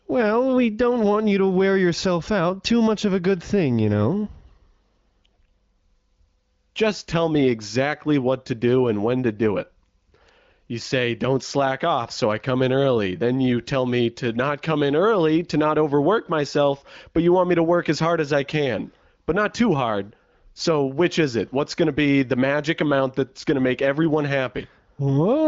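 The speech recording has no technical faults. It carries the band limit of the AMR wideband (HD Voice) codec, with nothing above 7.5 kHz, and its clarity points to one of the higher AMR-WB rates, around 18 kbit/s.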